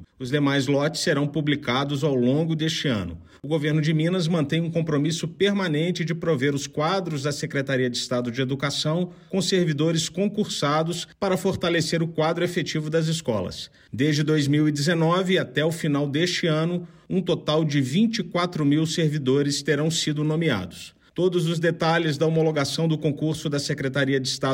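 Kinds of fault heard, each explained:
No kinds of fault are heard in this clip.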